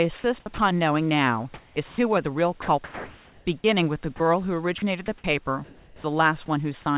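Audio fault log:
0.4–0.58 s, 2.62–3.64 s, 4.78–6.48 s, sound chopped by the voice detector: the sound flickers in and out with hissy fill, about 100, 720 and 520 ms in all, likely from the detector toggling on quiet edges.
1.54–1.98 s, comfort noise in place of the background: the room tone turns flat and featureless for about 320 ms, likely synthetic noise filling a pause the sender didn't transmit.
1.88–1.98 s and 4.16–4.2 s, sound dropped by the voice detector: about 90 ms and then 40 ms of sound vanish into steady noise, likely because the detector took them for background.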